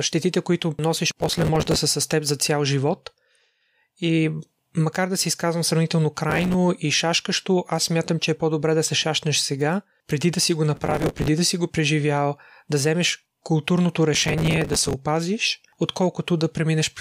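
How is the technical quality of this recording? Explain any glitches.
The speech gets chewed up by processor overload crackle four times: 1.2–1.76 s, after "щетите които носиш" and before "са с теб за"; 6.3–6.54 s; 10.75–11.28 s, between "преди да си го" and "да си го преживял"; and 14.15–14.94 s, after "преживял да вземеш културното". Each time the processor misses a run of buffer deadlines and replays stale audio in little hard-edged chunks, which gives that gritty, tearing crackle. The chunks fit a buffer of about 5 ms.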